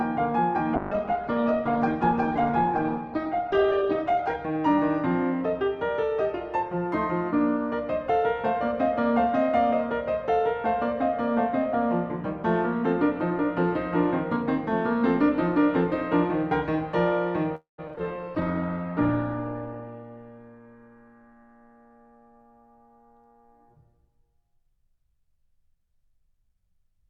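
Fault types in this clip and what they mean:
Call bitrate drop: The estimated bandwidth of the call fell, so the encoder cut its rate from 96 kbps to about 10 kbps and coded the music far more coarsely. From 0.76 to 4.43 s the top end shrinks from 20 kHz to 8 kHz, bottoming out for about 3.6 s, and the sound turns muffled and rough. A second drop, 18.36 to 24.22 s, reaches 11 kbps with a 12 kHz ceiling for about 1.2 s.
Call audio freeze: Around 17.55 s the music stalls for about a quarter of a second, most likely because packets were held up in transit until the receiver's jitter buffer ran dry. The last sound is stretched into a fading tail, followed by roughly 140 ms of silence. At 17.80 s the music picks up exactly where it stopped, so nothing is lost, but everything after runs about 0.23 s later.
Repeated packet loss (robotic sound): Right after the stall, packets went missing several times in quick succession, and each hole was patched by extending the previous sound before the next gap arrived. 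Between 17.88 and 18.01 s there are four short breaks, none longer than about 9 ms. About 80 ms of music is missing and about 25 ms is filled in, giving a brief choppy stutter across that eighth of a second.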